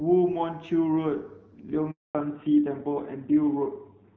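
At 1.91 s the speech cuts to silence for 240 ms until 2.15 s, a handover gap where no frames arrived while the call switched networks. From 2.15 s onward everything above 4 kHz is gone, leaving the speech duller and rougher than the clear HD Voice before it. This is a fallback to narrowband, from AMR-WB to a narrowband codec, consistent with AMR-NB at around 7.4 kbit/s.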